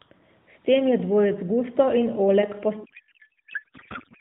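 From 2.84 s to the end, the speech turns into garbled noise and warble that barely tracks it. This is a codec payload misread: octet-aligned AMR frames are being decoded as bandwidth-efficient, so every field lands in the wrong place.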